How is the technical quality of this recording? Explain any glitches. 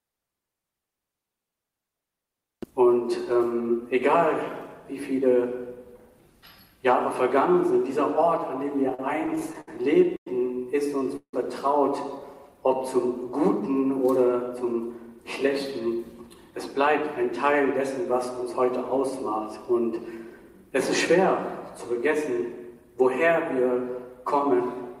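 The recording suffers from network delivery problems in the middle section: a run of stuttering, a held sound, a brief freeze, and two stretches where playback hurries to catch up.

From 8.89 to 9.68 s there are repeated stalls (stutter): seven brief gaps, the longest 65 ms, where packets arrived late and the receiver kept extending the last sound. About a fifth of that span is filled in, so the sound drags and stumbles. A spectrogram shows repeated smeared, flattened patches.

At 10.16 to 10.27 s a short stall from a late packet holds one sound for about 100 ms. The receiver stretched it until the packet turned up and then resumed where it left off. The waveform shows a repetitive, slightly dipping stretch.

At 11.16 to 11.34 s the sound freezes into a fading buzz and then about 80 ms of silence before resuming. The likely cause is a call audio freeze, with packets held up in transit. 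On the waveform a decaying tail drops to a flat line.

From 14.49 to 15.47 s and again from 15.86 to 18.01 s a jitter buffer speed-up plays the audio at about 107% and then 104%. Tiny pitch-period slices were trimmed to cut excess buffered delay, so the first stretch sounds hurried and both keep their pitch. Harmonics stay level on a spectrogram while events crowd closer together.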